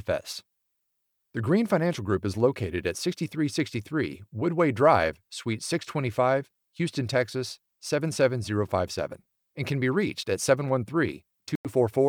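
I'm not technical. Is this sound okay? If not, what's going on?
No. A Bluetooth stall at 11.55 to 11.67 s: the speech briefly cuts to silence, a gap of 95 ms, then carries on. The likely cause is wireless interference delaying the audio, so the headphones ran out of sound until it arrived.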